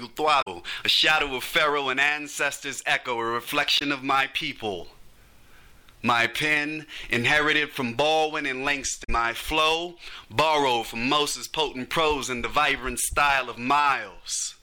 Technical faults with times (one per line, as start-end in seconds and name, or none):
0.38-0.48 damaged data in a compressed stream
3.75-3.82 damaged data in a compressed stream
9.00-9.09 damaged data in a compressed stream